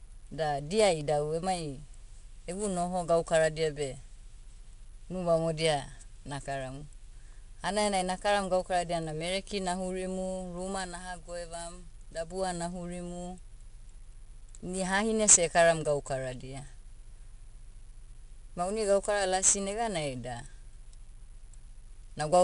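From start to finish the speech carries 4-bit ADPCM compression, plainly audible as a gritty hiss that rides on every louder syllable and sinks back in the gaps. Each sample is coded as a coarse 4-bit step from a predicted value, so the rounding error tracks the signal level. The rate points to about 88 kbps. A spectrogram shows a grainy noise floor swelling with the speech and a hard ceiling at 10.6 kHz, and the waveform looks fuzzed along loud stretches.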